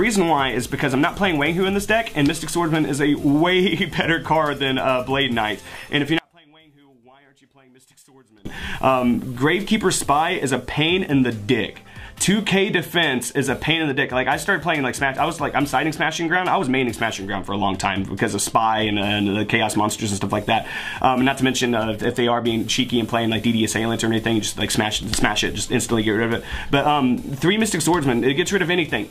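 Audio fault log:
6.19–8.45 s, one channel inverted: the sound drops by about 32 dB to a faint copy. The likely cause is reversed polarity on one stereo channel. Summed to mono, the shared centre content cancels, leaving only the faint difference between channels.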